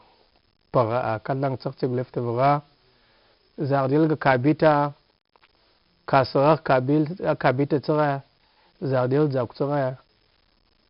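Throughout, 4-bit ADPCM compression's coarse steps add gritty hiss to loud syllables. Nothing passes 5.3 kHz, pointing to a low sample rate. Speech sounds dull.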